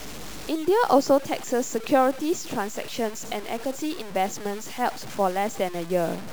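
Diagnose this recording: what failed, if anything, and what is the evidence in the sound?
Low bit depth without dither, throughout: grainy distortion follows the speech about 20 dB down, which fits a likely truncation to 6 bits during sample-format conversion.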